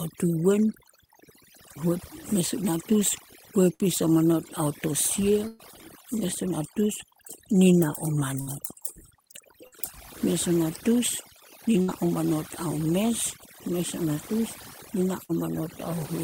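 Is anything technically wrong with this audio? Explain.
Yes. Two faults are present.

Overdone noise removal runs throughout. A noise suppressor set far too aggressively cuts individual frequency bands whenever they sit close to its noise estimate, and it takes the softer parts of the speech with them. The background collapses to near silence scattered with twinkling, chirpy specks.

A burst of packet loss occurs six times: at 3.73–3.83 s, 5.48–5.62 s (just before "mes o"), 8.41–8.50 s, 9.67–9.75 s, 11.82–11.91 s (between "a natus" and "o manot ao mes"), and 15.24–15.32 s (right after "o natus nina"). In each, a short run of audio never arrived in time, and the receiver stretched the last sound to cover it. That gives a brief held buzz or fading hiss of about 50 to 60 ms before the speech picks up further on. Roughly 60 ms is lost each time, except at 5.5 s, where about 120 ms vanishes and the concealment holds for about 116 ms.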